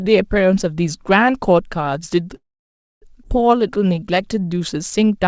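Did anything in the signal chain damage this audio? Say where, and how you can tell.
Yes. At 2.36 s the speech stops and a short fading tail of the last sound gives way to near silence. That silence lasts about 0.61 s, and the whole hold runs to 3.04 s. The speech then resumes exactly where it left off, with nothing lost. This is a call audio freeze at the network and jitter-buffer stage, likely caused by packets stalling in transit. The buffer ran dry, concealment extended the last sound until it faded, and playback simply waited for the delayed audio.

At 3.24 to 3.27 s the speech jumps forward with almost no gap. Two sections that don't belong together are spliced nearly directly. This is a skip ahead, and roughly half a second of speech is gone. The stretch was dropped either in transit or by the buffer overflowing while later audio was already waiting. It dropped that material outright rather than replaying it.

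From 3.55 s to 5.27 s the speech drags. It plays at about 91% speed with the pitch unchanged, and sounds are drawn out. That is a jitter buffer slow-down: the buffer, having run low or raised its target delay, padded the stream by repeating individual pitch periods and bits of pauses, adding 162 ms to build up a reserve. Throughout, the G.722 call path keeps the band capped at 8 kHz.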